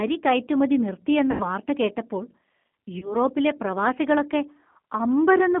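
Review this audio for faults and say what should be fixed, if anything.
The speech runs through the G.729 codec for the whole clip. Its 8 kbit/s rebuilding of each frame from a filter and a few pulses gives a rough, synthetic texture inside a 200 Hz to 3.4 kHz line band. That grain sets it apart from simple telephone band-limiting, and the sound points to the G.729A variant. Using a wideband codec with a higher bitrate would prevent it.

VoIP packet loss concealed by the speech codec occurs from 1.31 to 1.47 s, where about 90 ms of audio is missing, and from 2.99 to 3.17 s, where 30 ms is missing. Instead of silence, the decoder stretches the last sound into a buzzy tone or a coloured noise that fades. The sound stays weak for a while after packets resume, which separates this from a clean dropout. Adding a jitter buffer or forward error correction would prevent it.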